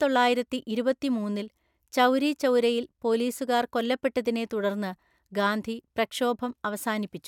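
Nothing stood out on listening to this speech recording.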